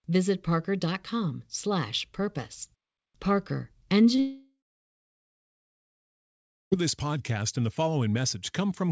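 A speech recording over a wideband call path; nothing appears above 8 kHz on the spectrogram, consistent with a G.722 codec. From 4.16 to 4.20 s there is short concealed packet loss: a brief smear where the decoder stretches the preceding sound, visible as a smoothed, repeated slice in the spectrogram. Straight after, from 4.20 to 6.74 s, comes what is likely a long network dropout: a fading buzz, then about 2.1 s of flat, near-empty waveform, before the audio returns at "this podcast and the", missing everything in between.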